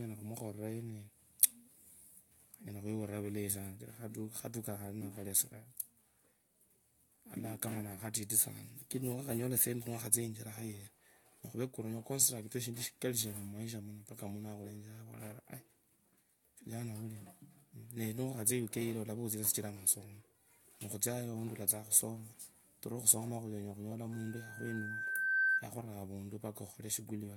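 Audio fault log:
24.12–25.68 s, loudspeaker feedback squeal: the microphone was picking up its own loudspeaker, and at 1.6 kHz the loop gain passed one, so that tone fed on itself, swelling over about a second and a half into a piercing whistle roughly 10 dB above the speech.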